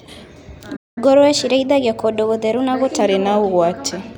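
A playback stall hits at 0.76 s: the speech cuts to silence for about 203 ms, until 0.98 s, then resumes. The likely cause is the player running out of buffered data or its output thread being blocked, leaving nothing to send to the output.

Catch-up at higher speed follows from 0.98 s to 3.01 s. The player resamples its backlog to run 1.1 times faster, so the speech is quicker and raised by about a semitone and a half. It then returns to normal speed and pitch once the lost time is recovered.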